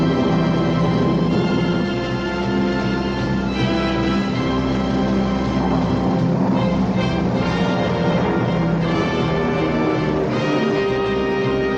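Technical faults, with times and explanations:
No technical faults can be heard, so there are no times or explanations to give.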